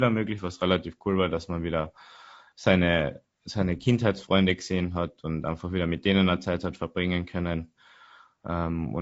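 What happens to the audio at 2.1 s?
At 2.1 s the speech sounds rough and grainy, but the same coarse texture runs through the whole clip rather than starting there. The likely cause is low-delay AAC compression, AAC-ELD at a rate in the region of 32 kbps. Its short frames resolve the pitch harmonics poorly, so noise fills the gaps between them. On a spectrogram the harmonic stripes look smeared, with speckled energy between them and a blurred top band.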